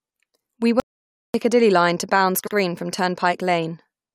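At 0.80 s the speech cuts off abruptly and the track falls to complete silence until 1.34 s, a gap of about 0.54 s with no room tone at all. This audio dropout to silence most likely came from the input being lost while the recorder kept writing silence, so whatever was spoken in that half second is gone. On a waveform it shows as a flat line, and on a spectrogram as a sharp-edged, fully black column.

From 2.46 s to 2.53 s there is a brief stutter: a 72 ms stretch of speech plays and then plays again once. These are repeated frames. The block length fits a run of about three compressed frames being written twice, and it lengthens the clip by 72 ms. On a spectrogram the same short pattern appears twice side by side. The waveform shows the same shape duplicated.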